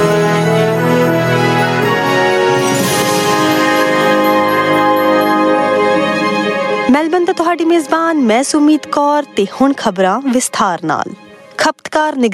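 Gain pumping runs throughout: the gain swings by around 20 dB under loud sounds, flattening the dynamics. The likely cause is input gain set far too high, with a fast limiter clamping it. A waveform shows a squashed, near-constant envelope; a spectrogram shows the noise floor brightening between louder events.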